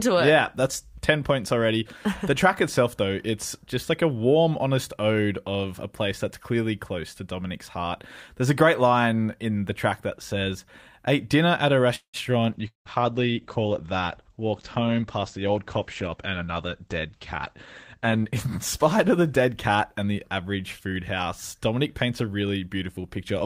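At 11.95 s the speech stalls for about 0.21 s in a call audio freeze. The last sound gets stretched into a short fading buzz, then roughly a tenth of a second of near silence. Nothing seems to be lost, because the speech resumes right where it stopped, just about 180 ms later than it should. That pattern most likely means packets got held up and the jitter buffer ran dry while it waited.

From 12.50 s to 21.20 s there's a call bitrate drop. The top end goes. Content that reached about 20 kHz is now cut off around 8 kHz, and the speech turns muffled and a bit rough and watery. That fits the encoder being told to work with far fewer bits, something like 64 kbps falling to around 12 kbps, after the call's bandwidth estimate dropped. It sits at its worst for about 5.3 s before recovering near 21.2 s.

Inside that stretch, from 12.68 s to 12.88 s, there's a long network dropout. Again the last sound is smeared into a fading buzz, followed by about 130 ms of silence. 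This time, though, the speech comes back further along, with roughly 180 ms of it simply gone. That's most likely a run of packets that never arrived at all, rather than ones that showed up late.

Then from 15.02 s to 17.14 s comes a jitter buffer speed-up. The speech runs about 8% fast while the pitch stays put, so it sounds slightly hurried. The receiver had more audio queued than it wanted, probably from delayed packets landing in a bunch, so it trimmed out tiny pitch-period-sized slices over and over. Altogether that shaves off about a fifth of a second of delay.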